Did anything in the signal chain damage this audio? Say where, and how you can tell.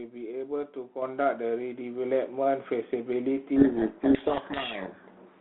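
Yes. At the call-processing stage, the microphone volume stepped up at 1.02 s: automatic input control raised the gain by about 7 dB, so speech and background jump louder together.

At the codec stage, from 3.56 s to the end, a codec payload misread: the receiver unpacks G.726 code words in reversed bit order, burying the speech in harsh distortion.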